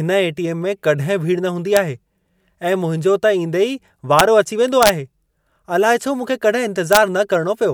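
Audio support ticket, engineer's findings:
Integer overflow at 1.77 s, 4.19 s, 4.83–4.89 s and 6.93–6.97 s in the speech. Violent cracks on loud peaks. Gain or summing stage exceeds integer maximum by only about 1 dB; samples wrap to opposite sign instead of saturating. Needs clamping.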